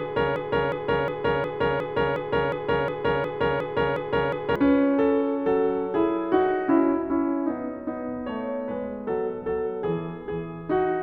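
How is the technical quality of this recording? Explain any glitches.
The recording has one clear glitch, a broken-record loop running from the very start of the music until about 4.56 s.

From 0 to 4.56 s, a 0.36 s fragment plays over and over, already looping when the clip begins and heard 12 times in a row. The likely cause is a stalled player or stream re-sending the last piece it held, so whatever music belonged in those seconds is lost. It sounds like a stuck CD. On a spectrogram or waveform it appears as identical blocks tiled every 0.36 s.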